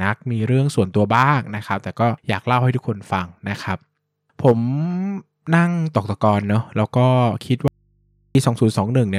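At 7.68 s there's an audio dropout to a faint residue: the speech cuts off abruptly for about 0.67 s, until 8.35 s, leaving just mains hum roughly 45 dB below the signal. It's likely the source dropped while the input stayed open and live.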